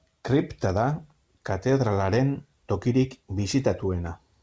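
No faults can be heard in this speech clip. It has come through a WebRTC call path that is working normally, and the sound fits G.722 at 64 kbps, with nothing above 8 kHz.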